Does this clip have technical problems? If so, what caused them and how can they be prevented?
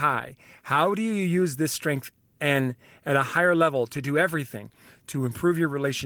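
No, this clip has no technical problems, so there is nothing to prevent.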